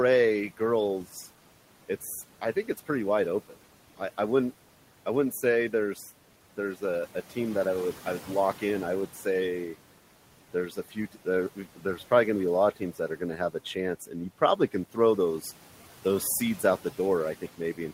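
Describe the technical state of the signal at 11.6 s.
From 11.56 to 11.99 s, just before "probably going to", parts of the speech sound swallowed and faint, sinking by up to about 12 dB for roughly 150 ms in total within that span. This is speech cut by the noise suppressor. It mistook those quieter speech components for steady background noise and turned them down along with it, so the soft parts of the sound lose their presence instead of coming through at normal level.

Around that moment the background drops away in the gaps and rises back up under the speech. These are noise suppressor artifacts, present throughout the clip. Frame by frame, the suppressor pulls down whatever bands it judges to be steady noise, by about 12 dB here. The room noise itself, about 19 dB below the speech, is simply part of the recording.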